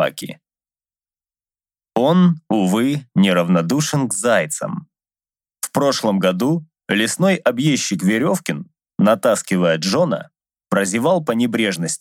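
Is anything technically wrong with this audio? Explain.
No, no technical faults detected.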